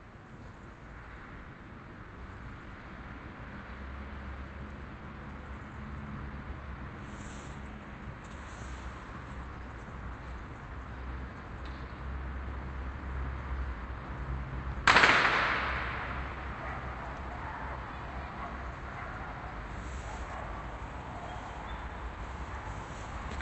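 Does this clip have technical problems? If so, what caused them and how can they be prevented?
Yes. Clock drift between sender and receiver runs throughout: the sender's clock is about 5 percent fast, so the jitter buffer keeps filling. Locking devices to a shared clock or resampling adaptively at the receiver prevents this.

Repeated timing corrections run from 0.09 to 23.08 s, where the receiver cuts short pieces to keep pace, giving uneven small hiccups in the sound. Smooth drift compensation avoids these audible cuts.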